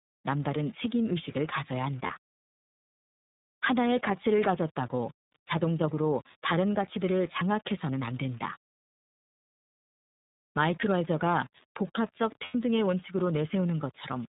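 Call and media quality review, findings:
Grainy distortion riding on the speech throughout, grit rising and falling with level, quietest passages sputtering. Likely cause: undithered rounding to roughly 7 bits, error about 30 dB below signal. Spectrogram: signal-correlated hash filling gaps between harmonics; waveform: visible stair-stepping on quiet stretches.

iLBC codec artefacts, plainly audible across the whole clip: rough, slightly synthetic speech with nothing above 4 kHz. Consistent with the 13.33 kbps, 30 ms frame mode, each frame's excitation coded independently. Spectrogram: hard ceiling at 4 kHz; waveform: smoothed, buzzy-looking excitation.

Lost iLBC frames at 2.06–2.11 s (30 ms, fits one frame) and 12.45–12.55 s (90 ms, fits three). Decoder concealment repeats the last pitch cycle plus noise, heard as a held buzzy vowel, with quick recovery. Spectrogram: frozen harmonic stripes; waveform: repeating periodic cycles, fading over the longer gap.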